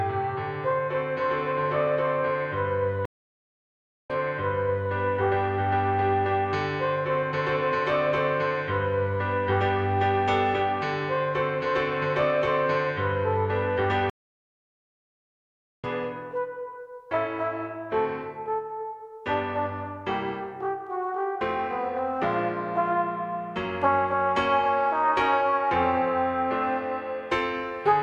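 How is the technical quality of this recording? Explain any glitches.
The recording is marred by two stream reconnects. At 3.05 to 4.92 s, a stream reconnect leaves about 1.04 s of silence while the player reconnects and restarts its decoder, then resumes 0.82 s earlier, replaying sound. At 14.10 to 15.87 s, 1.74 s of silence ends with a jump roughly two seconds ahead, skipping audio.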